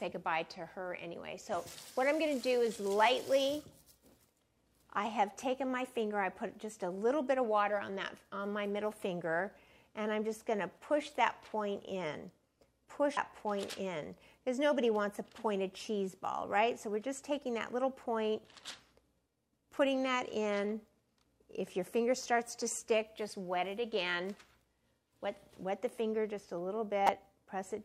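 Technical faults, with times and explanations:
13.17 s and 27.06 to 27.09 s, damaged data in a compressed stream: corrupted bytes make the decoder misread frames and resynchronise, heard as a very brief glitch, then a longer one.
19.74 to 19.78 s, chunks out of order: a 10 ms chunk plays three chunks late, so the sound jumbles briefly across three hard joins.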